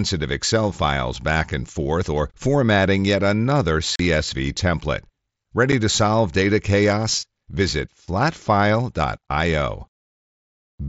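Voice packets between the headset and phone went missing at two points, and silence or an idle pattern filled each gap with nothing to conceal it: unconcealed Bluetooth headset packet loss. At 3.96 s, right after "or formatting yet another", about 40 ms of speech drops out, a run that fits five lost frames. A shorter 7.5 ms hole follows at 5.72 s, just before "to solve data chaos". Both holes have abrupt edges that chop the speech. The mSBC link itself still passes wideband speech with its light coding grain.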